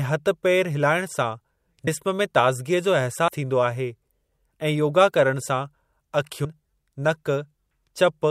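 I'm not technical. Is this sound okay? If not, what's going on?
No. At 1.87 s (just before "जिस्म में"), 3.28 s (just before "थींदो आहे") and 6.45 s, the speech jumps ahead by roughly 0.1 s, 0.15 s and 0.15 s respectively. These are compressed frames skipped: a few small chunks of the compressed file were lost or rejected, so playback leaps past them.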